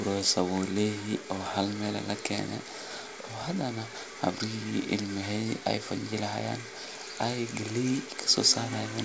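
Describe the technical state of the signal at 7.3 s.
At 7.3 s the speech is intact, with no fault at that moment, only the normal character of the WebRTC call path, whose G.722 coding leaves nothing above 8 kHz.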